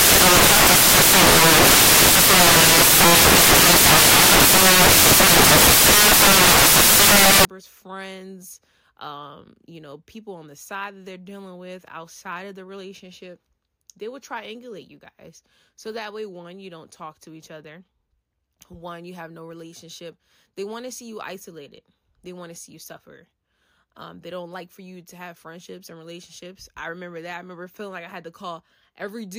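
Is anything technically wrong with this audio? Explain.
Yes. From the start to 7.45 s, just before "friends um you know", the samples are built from the wrong bytes. The reader misassembles each sample, so fast-changing low bits dominate. The speech turns into loud, harsh broadband noise, close to white on loud sounds.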